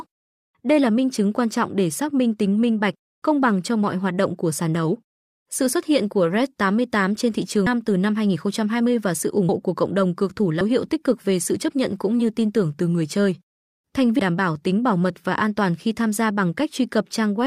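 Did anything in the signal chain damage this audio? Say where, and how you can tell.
Yes. The codec stage has compressed frames skipped at 7.66, 9.49, 10.61 and 14.19 s. The speech jumps ahead by roughly a tenth to nearly half a second at each join. Those jump lengths fit multiples of a 32 ms frame.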